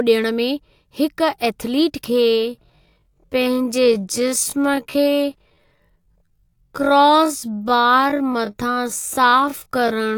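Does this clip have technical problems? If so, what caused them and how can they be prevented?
Yes. Time-stretching software likely slowed the speech to about 0.57 times its original pace from 2.04 s to the end, filling the gap by repeating short fragments so the pitch stayed put. This time-stretched section drags abruptly at an unchanged pitch. To prevent it, fit the audio to length by trimming pauses or re-recording rather than stretching such a large stretch so far.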